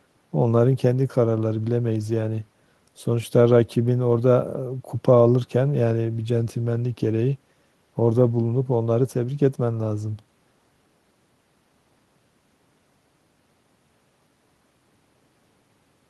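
A stretch of recorded speech, and there's nothing technically wrong to point to anywhere in it.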